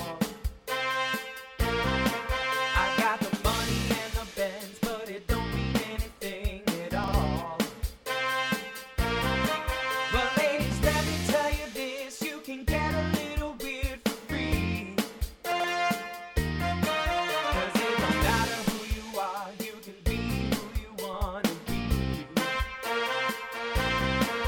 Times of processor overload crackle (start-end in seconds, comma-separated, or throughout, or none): none